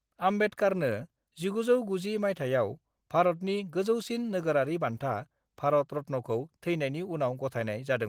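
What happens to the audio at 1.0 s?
At 1.0 s the speech carries on intact, with nothing breaking up, dropping out or distorting, only the light softening expected from Opus voice compression.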